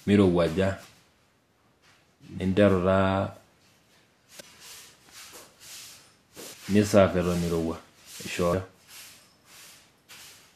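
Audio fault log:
0.84 s, 4.39–4.41 s, 6.53 s and 8.52 s: damaged data in a compressed stream, heard as brief chirps or blips where corrupted frames are misread and the decoder loses sync.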